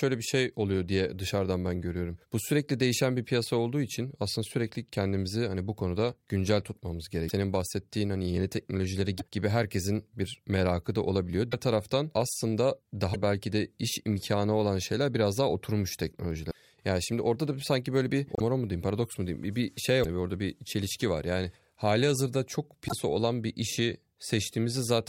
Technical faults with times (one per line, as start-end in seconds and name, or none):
7.28-7.31 broken MP3 bit reservoir
9.18-9.22 broken MP3 bit reservoir
11.51-11.54 broken MP3 bit reservoir
13.13-13.16 broken MP3 bit reservoir
16.50-16.56 broken MP3 bit reservoir
18.35-18.40 broken MP3 bit reservoir
20.02-20.05 broken MP3 bit reservoir
22.87-22.93 broken MP3 bit reservoir